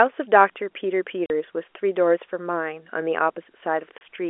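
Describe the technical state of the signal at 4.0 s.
At 4.0 s there is packet loss filled with silence: a 30 ms hole from 3.98 to 4.01 s, which fits three 10 ms packets dropping out. The receiver inserted digital silence instead of concealing the gap, so the band-limited telephone-line audio cuts off abruptly.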